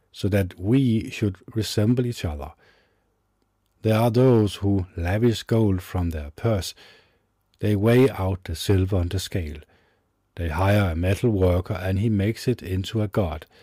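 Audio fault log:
Throughout, hard clipping. The speech is driven about 5 dB past what the chain can pass, so the loudest peaks are sliced flat. Only a small share of the audio goes over, around half a percent. The damage sits on the strongest moments. Each flattened peak throws off harmonics high in the spectrum. That is heard as brief crackle and grit riding on the loud syllables, not as steady fuzz.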